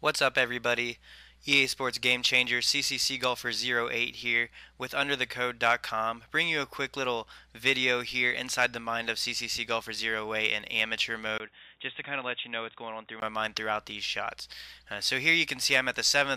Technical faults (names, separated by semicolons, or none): input switched to a poorer device